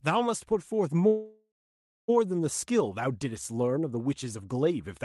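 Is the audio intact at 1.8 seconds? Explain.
No, 1.8 seconds falls inside a call audio freeze that runs from about 1.07 to 2.10 s. Incoming packets were likely held up, so the jitter buffer ran dry and the receiver stretched the last bit of sound into a fading buzz or hiss that settles into silence for roughly half a second. When the packets turn up, the speech picks up right where it left off, so nothing's lost, just a one-second hole pushed in.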